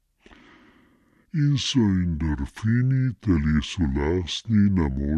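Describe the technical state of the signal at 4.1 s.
At 4.1 s you're hearing the wrong sample rate problem, and it runs through the whole clip rather than just this spot. The samples are being played back slower than they were captured, with no conversion in between, so speed and pitch drop together. Everything runs at about two-thirds speed and sits roughly 7 semitones low, which fits 48 kHz material played out at 32 kHz. The speech comes across as deep, dragging and sluggish.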